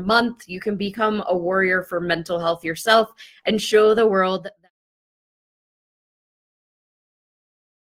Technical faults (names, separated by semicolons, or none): adaptive stream starting at a low bitrate